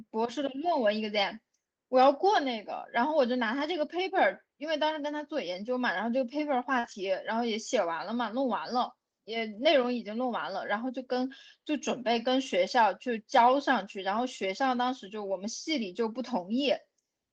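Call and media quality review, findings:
Lost packets rebuilt from error correction at 2.35, 3.59–3.65, 6.83–6.93, 9.53–9.63 and 14.13–14.19 s. Opus in-band FEC copies decoded, so no gaps, just rougher, noisier frames lasting 20–60 ms.

Short concealed packet loss at 6.79–6.85 s. About 40 ms never arrived and the decoder stretched the preceding sound across the hole, giving a quick smear right before the FEC patch.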